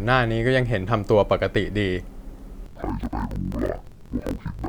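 From 2.66 s to the end at 4.68 s, interleaved audio read as planar turns the speech an octave low, doubled and choppy. Each block of about 23 ms, consistent with 1024 samples, plays its halves together at half speed, so unlike slowed playback the pace stays right, chopped at 43 Hz.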